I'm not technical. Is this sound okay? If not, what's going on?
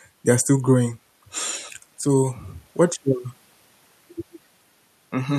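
Yes, this recording sounds fine, with nothing going wrong that a listener would notice. The speech comes through steadily, without dropouts, jumps or other disturbances.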